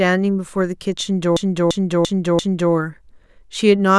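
From 1.37 s to 2.73 s the speech stutters through a repeated buffer: one 341 ms piece, fitting an 8192-sample buffer, plays four extra times, each restart a hard join. Unlike a dropout nothing goes silent; unlike an echo the copies never overlap or fade.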